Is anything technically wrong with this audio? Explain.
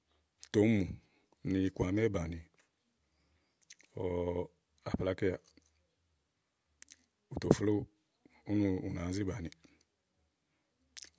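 No, nothing is technically wrong with this audio.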